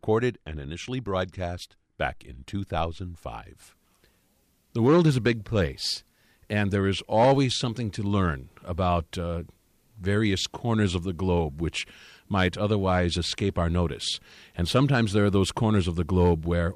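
Nothing goes wrong anywhere in this bit of speech, so there's no fault to point to at any moment.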